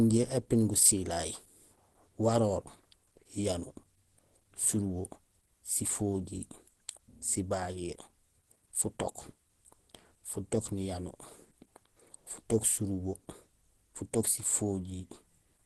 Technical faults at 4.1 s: Opus compression

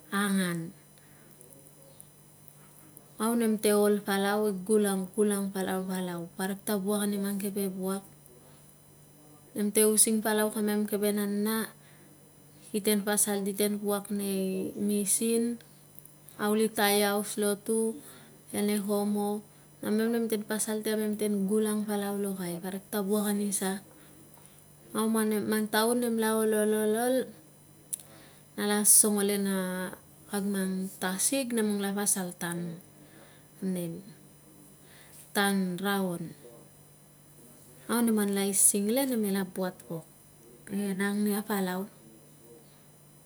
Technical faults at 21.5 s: USB whine

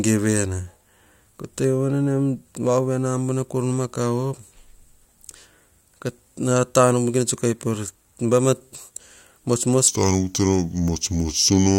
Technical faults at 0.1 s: none

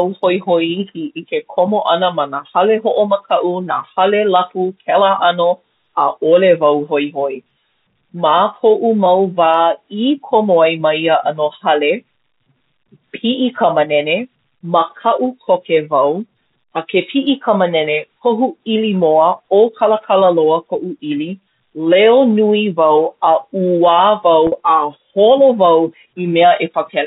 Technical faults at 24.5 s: packet loss with pitch repetition

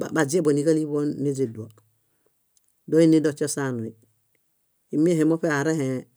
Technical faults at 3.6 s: none

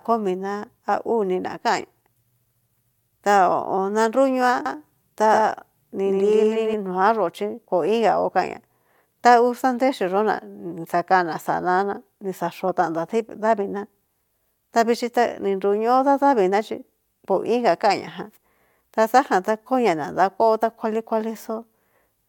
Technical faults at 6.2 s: doubled audio track

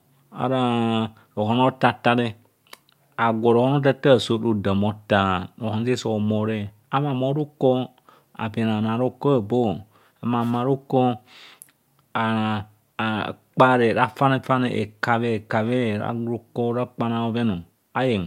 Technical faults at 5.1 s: none

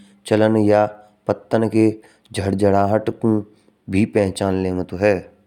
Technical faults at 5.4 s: none

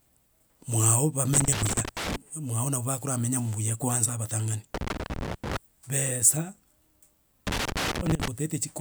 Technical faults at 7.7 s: loose connector crackle

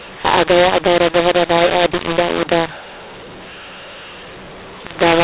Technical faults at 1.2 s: mu-law and A-law mixed up

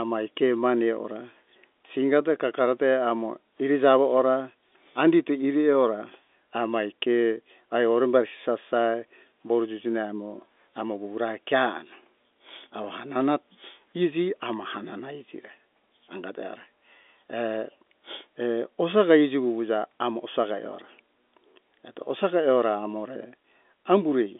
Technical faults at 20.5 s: none

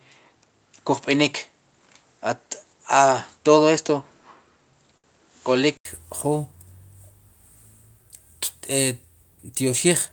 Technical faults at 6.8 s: none

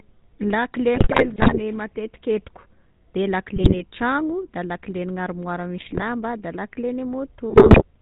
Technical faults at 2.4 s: GSM full-rate codec

